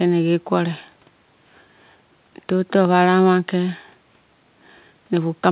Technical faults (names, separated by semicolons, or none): none